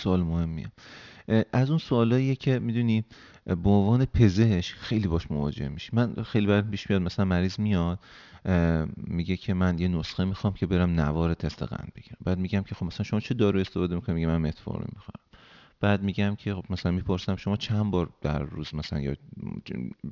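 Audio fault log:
Throughout, aliasing: the speech was brought down to what sounds like a 12 kHz rate with no filter ahead of it, so everything above 6 kHz has folded back below that edge. The folded energy sits well under the speech, but it roughens the sibilants into a gritty, metallic edge, and the spectrum runs hard right up to 6 kHz.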